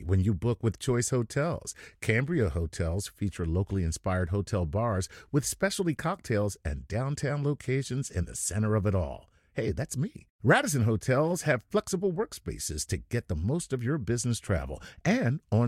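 Nothing in this speech recording stands out as a technical fault; there's simply nothing here to flag.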